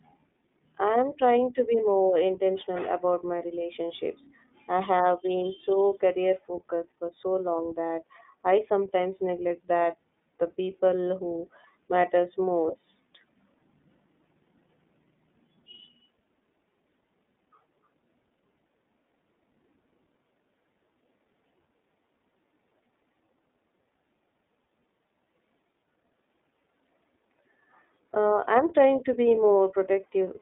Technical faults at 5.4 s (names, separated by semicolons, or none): iLBC codec